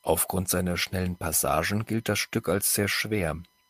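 No technical faults can be heard anywhere in this recording.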